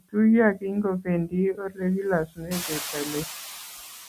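A speech recording with noise suppressor artifacts throughout. The suppressor pulls the steady background down by about 5 dB. It works band by band and frame by frame, so the leftover noise does not stay even. It dips in the pauses and comes back up under the talking. The same processing also causes speech cut by the noise suppressor. At 0.54 to 0.64 s, 1.53 to 1.82 s and 2.25 to 2.95 s, it mistakes parts of the speech for noise. It turns them down by up to about 18 dB. The affected speech in those spans sounds swallowed or faint. The last span is the longest, with roughly a third of a second affected. Part of that span coincides with the room noise rising by about 15 dB near 2.5 s, to about 14 dB below the speech.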